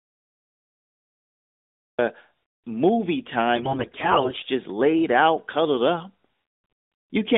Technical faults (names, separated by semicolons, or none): cut-off start; AMR bit errors